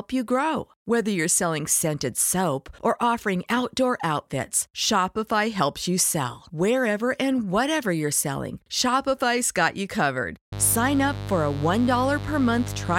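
Just after "got you covered", at 10.52 s, mains buzz starts and lasts until the end at 12.98 s. Sharp spikes twice per 50 Hz cycle spread harmonics into several kHz, so it rasps instead of humming smoothly, sitting roughly 10 dB below the speech.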